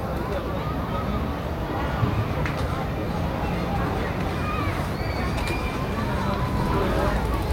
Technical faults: none

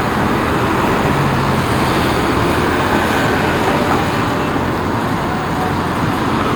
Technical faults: audio missing between chunks

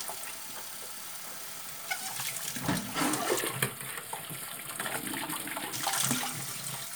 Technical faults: channel delay (comb filtering)

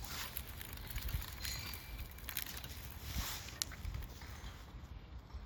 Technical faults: none

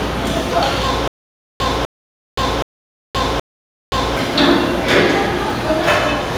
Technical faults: stutter with silent gaps

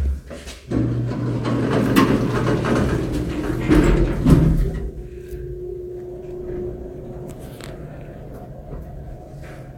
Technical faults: none

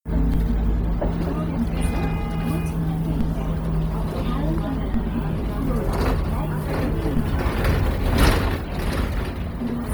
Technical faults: Bluetooth LC3 compression; DC step

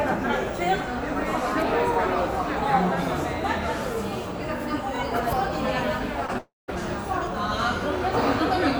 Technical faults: overlapping chunks; short concealed packet loss; long network dropout

